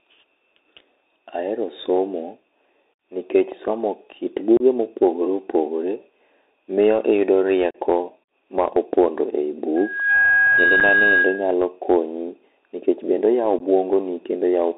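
Throughout, the speech sounds muffled and boxy, with scratchy s sounds and a fine granular hiss underneath. This is the Bluetooth CVSD headset codec: a 64 kbps one-bit-per-sample coder whose adaptive step lags loud high sounds, on a line passing only about 200 Hz to 3.7 kHz.

At 4.57 to 4.62 s there is an abrupt gap about 30 ms long, and another at 7.71 to 7.76 s lasting 37.5 ms. Both are unconcealed Bluetooth headset packet loss: several short voice packets between headset and phone never arrived, and silence or an idle pattern filled their place with hard edges.

From 9.76 to 11.54 s, a steady 1.6 kHz tone swells over roughly 0.4 s into a squeal, sitting about 5 dB above the speech. This is loudspeaker feedback squeal: the microphone picked up its own loudspeaker, and at that frequency the loop gain exceeded one, so the tone kept growing.

Inside that squeal, at 10.80 s, there is a brief 7.5 ms dropout. 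A final 15 ms hole comes at 13.59 s. Both are further packet losses of the same kind, each affecting only one or two packets.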